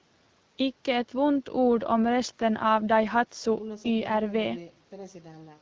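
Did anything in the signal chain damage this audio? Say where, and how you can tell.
No, nothing damaged this audio.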